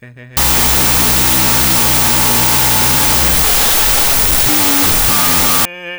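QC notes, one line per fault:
0.37–5.65 s, wrong sample width: 32-bit float music read as 16-bit integers, splitting each sample into two values. The high halves keep a rough outline and the low halves give loud noise. Doubled sample count halves speed, an octave lower. Spectrogram: faint, halved harmonics under broadband noise; waveform: dense and noisy.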